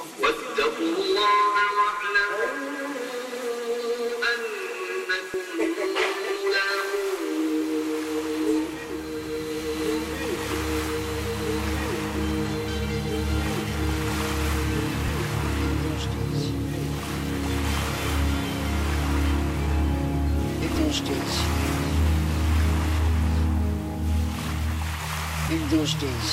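At 5.34 s the sound jumps ahead, and the same thing happens at 10.36, 15.08 and 20.76 s. Each is a likely dropped buffer (overrun): the samples were overwritten before they were collected, so a short piece vanishes and its neighbours butt together with no gap. The skips are small, around 20 ms at the first and third, about twice that at 10.36 s, and the longest near 20.76 s.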